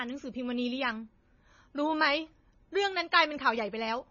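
MP3 compression runs throughout the clip. The speech has nothing above 7 kHz and a heavily watery, swirling texture. The likely cause is a starved encode, which fits about 24 kbps: the encoder cut the treble at a fixed point and let weak frequency lines flicker between frames.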